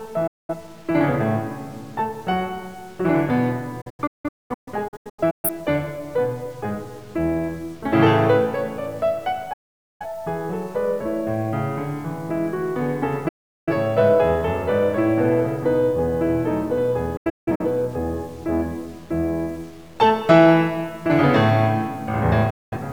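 Low bit depth without dither runs through the whole piece of music: quiet passages turn gritty. The most likely cause is truncation to about 8 bits with no dither, leaving grainy error roughly 30 dB below the music that tracks its level.

Digital broadcast dropouts mute the music at 0.27 to 0.54 s, 3.81 to 5.50 s, 9.53 to 10.06 s, 13.28 to 13.73 s, 17.17 to 17.64 s and 22.50 to 22.77 s. The receiver lost valid frames, faded out over 8 ms, and the programme sent meanwhile is gone. The 3.81 s and 17.17 s dropouts break into several short holes.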